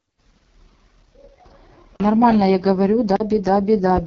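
From the start the speech has that rough, raspy edge of the AMR wideband (HD Voice) codec at its lowest rate, which fits about 6.6 kbit/s. The pulse-driven model struggles to track the voice, and nothing comes through above 6.8 kHz.

At 1.96 s and again at 3.16 s there's a block of digital silence, each a 40 ms hole where the output simply went silent, most likely because a buffer wasn't filled in time. Each one drops out abruptly and comes back with no fade.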